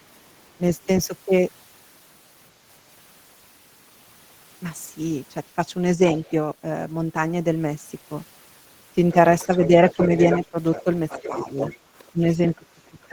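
At 6.08 to 6.31 s a faint second voice slips in underneath, very far down, something like 35 dB below the main talker. This is the other side's voice leaking through, likely because the loudspeaker feed reached the microphone and the echo canceller left a residue. Unlike crosstalk from a second microphone, it comes from the device's own loudspeaker.

From 9.1 s to the end the leak returns far more strongly, only around 10 dB under the talker.

Within that stretch, between 9.47 and 11.49 s, the main speech itself sinks in short pieces, roughly 10 dB at worst and adding up to a bit under half a second. This is speech suppressed in double talk, likely the canceller turning everything down while both sides spoke. What sets it apart from a simple level dip is that the talker's own voice is what drops out, and only while the far side is talking over it.

At 11.79 to 11.84 s the room tone ducks by about 7 dB and springs straight back. 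This is background gated by the echo canceller: a brief clamp on the microphone while the loudspeaker was active.

From 12.12 s to the end, double-talk suppression strikes again and runs deeper, near 15 dB.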